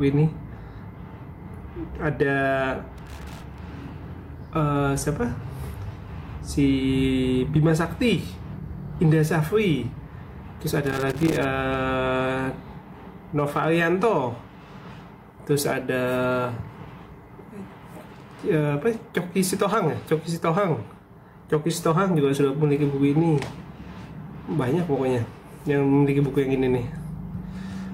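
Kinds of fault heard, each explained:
Loose connector crackle, from 2.98 to 3.58 s and again from 10.86 to 11.45 s: a worn or dirty contact somewhere in the cable run is intermittently opening and closing as it shifts, so the signal gets chopped on and off many times within each half-second stretch. Those abrupt breaks, plus any DC sitting on the line, turn into an irregular scratchy burst of crackle and pops laid over the audio.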